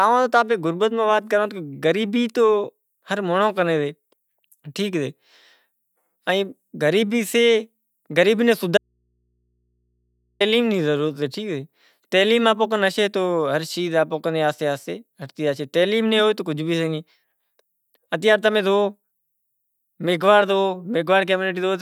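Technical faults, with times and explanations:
8.78–10.40 s, audio dropout to a faint residue: after "غریبی نوں" the speech abruptly gives way to faint hum for 1.6 s, likely a lost signal on a still-live input.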